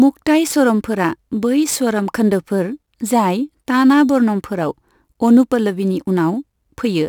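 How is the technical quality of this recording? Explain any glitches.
The speech carries a steady crude rate conversion fault. Throughout, the sound was resampled by repeating samples with no filter, which fits a 44.1 to 48 kHz conversion. That leaves an inharmonic fizz roughly 30 dB below the speech that tracks loud, bright syllables, unlike codec warble, which smears rather than buzzes.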